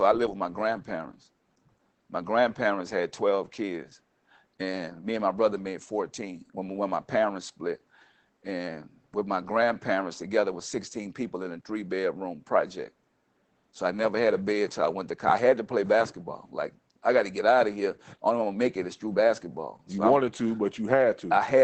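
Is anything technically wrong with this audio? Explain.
Yes. Opus voice compression runs through the whole clip, and its damage is plainly audible. The speech is band-limited to about 8 kHz (wideband), which points to a low bitrate near 12 kbps, where the SILK linear-prediction coder works alone. With so few bits it codes the excitation coarsely, so the voice sounds muffled, hoarse and faintly robotic. Simple low-pass filtering would dull the top end without that rough, synthetic texture, and an MP3-style codec would leave swirling, watery highs instead.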